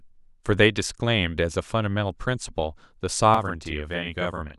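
From 3.34 s to the end, a channel delay (doubling) appears: one channel runs 40 ms late, so mono summing yields a single equal-level copy, unlike reverb's decaying tail.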